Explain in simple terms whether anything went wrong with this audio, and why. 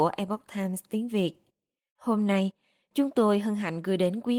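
Nothing went wrong here: the speech comes through Opus voice compression working as it should, and no technical fault can be heard anywhere in the recording.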